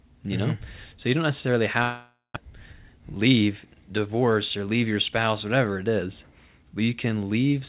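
Speech clip, band-limited to 4 kHz, which fits a G.711 A-law call path. After "you don't necessarily", 1.82–2.38 s becomes a fading buzz then near-silence, likely a long network dropout losing about 400 ms. Then a jitter buffer speed-up from 2.50 to 3.82 s, just before "divorce or leave your", plays about 9% fast at unchanged pitch, trimming roughly a tenth of a second.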